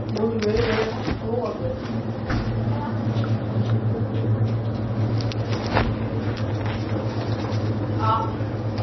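An everyday sound recording with heavy MP3 compression throughout. Nothing is left above about 5.9 kHz, so the top end sounds dull and cut off. Weak detail flickers and swirls, and sharp onsets smear. The damage fits a very low bitrate near 24 kbps, likely from the encoder running short of bits.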